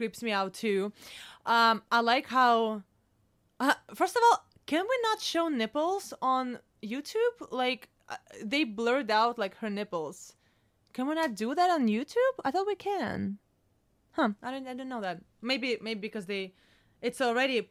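No audible technical faults.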